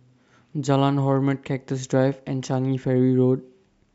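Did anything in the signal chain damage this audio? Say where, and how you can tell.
No, nothing in the signal chain damaged this audio.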